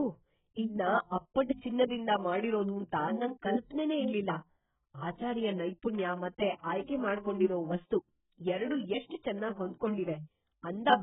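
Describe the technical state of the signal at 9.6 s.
AAC compression damage is present at 9.6 s, as it is across the whole speech clip. The band stops at about 3.8 kHz, likely from AAC-LC coding at a very low bitrate, around 8 kbps. Starved of bits, the encoder drops upper bands and coarsely quantises what remains, leaving speech dull, smeared and warbly.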